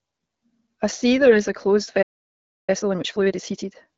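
From 1.18 to 1.38 s, AMR bit errors turn the speech hoarse, scratchy and gargly. Over roughly ten 20 ms frames, a few percent of the weakly protected bits arrived flipped. Pitch and loudness survive, so this is corrupted decoding rather than a lost-frame gap or muted concealment.

At 2.02 s a playback stall cuts the sound dead for about 0.66 s until 2.70 s, likely because the player ran out of buffered data or its thread was blocked. The output is fully silent, not rough or noisy, which separates it from the bit errors.

From 2.70 to 3.90 s, time-compressed catch-up plays the backlog at 1.5 times normal speed. Small pieces are cut out and cross-faded, so the speech sounds hurried while pitch stays normal. A plain speed-up would raise the pitch. The AMR-WB coding at 12.65 kbit/s is clear outside these spans.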